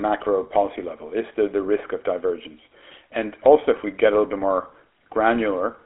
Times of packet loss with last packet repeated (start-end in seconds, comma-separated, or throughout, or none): none